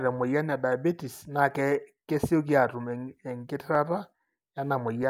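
Two devices in the chain likely run on separate clocks a few hundred ppm apart, so their shared buffer slips, dropping or repeating a small block of samples. These clock drift buffer slips click in the speech every 1.28 s, from 1.21 to 5.03 s.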